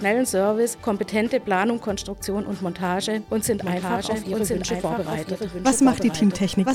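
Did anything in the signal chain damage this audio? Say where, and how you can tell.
Yes. A doubled audio track starts abruptly at 3.6 s and runs to the end. A second full-band copy trails by roughly one second, about 5 dB quieter, with no decay or room colour. It likely comes from a slower second capture path or an edit holding two offset copies.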